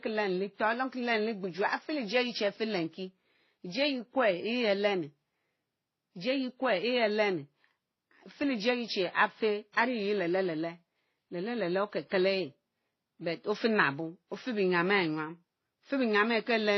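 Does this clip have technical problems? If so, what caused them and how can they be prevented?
Yes. The speech was likely passed through a chain of lossy codecs, which fits an MP3 stage near 24 kbit/s, then WMA near 32 kbit/s, then HE-AAC near 24 kbit/s. This is transcoding between lossy codecs: each encoder spends bits re-encoding the previous one's artefacts and adds its own. Throughout the clip nothing is heard above 5.9 kHz, and layered swirly, smeared textures sit together. To prevent it, encode once from the original source.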